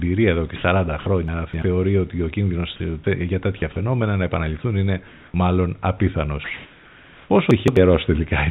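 At 0.56 to 0.64 s and again at 2.76 to 2.80 s, a brief stretch of speech is swapped for a flat hiss, about 80 ms and 40 ms long, and the speech resumes a little further on. This is likely sound dropped by the voice detector: the sending side judged those low-level moments to be background, stopped transmitting, and the receiver filled the gap with synthetic noise, so a few tens of milliseconds of the actual sound are gone each time. Between 1.28 and 1.62 s, and again from 7.51 to 7.77 s, the speech jumps and scrambles. These are chunks out of order: a block of roughly 85 ms turned up late and plays after the blocks that should follow it, three blocks late in the first case and two in the second. Nothing is missing, but the sequence is shuffled and each misplaced block leaves hard edges on both sides. Two pauses lose their natural room background and take on a steady, featureless noise instead, from 5.08 to 5.34 s at about 1 dB quieter than the real background, and from 6.44 to 7.30 s at about 4 dB louder. 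This is likely comfort noise in place of the background, generated by the receiver while the sender paused transmission during silence. The speech itself comes through a narrowband call codec, with nothing above 4 kHz.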